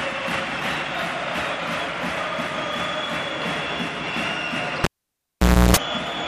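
At 4.84 s a live cable is pulled and plugged in: a pop, about 0.87 s of near silence, a 0.33 s burst of 60 Hz mains buzz, then a second pop at 5.77 s.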